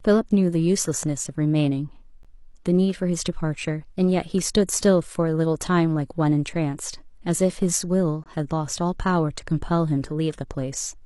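It's a speech clip with two short, hard-edged dropouts to silence, the classic gap between stream segments. The first is at 2.23 s and lasts about 14 ms. The second runs from 8.24 to 8.26 s, roughly 21 ms. They're six seconds apart, matching a 6-second segment length. At each boundary the timestamps don't quite meet, so the player pads the hole with silence. Nothing's actually missing from the speech; it's just pushed slightly later.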